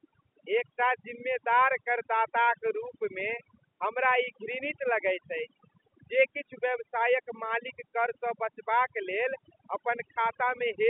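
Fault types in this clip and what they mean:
Overdone noise removal, throughout: an over-aggressive noise reducer mutes bands near its noise estimate, taking quiet parts of the voice with them and leaving a reduced, twinkling background.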